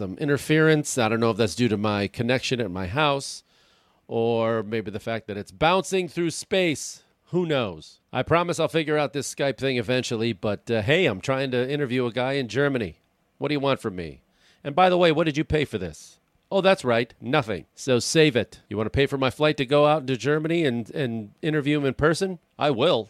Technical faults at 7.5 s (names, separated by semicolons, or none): none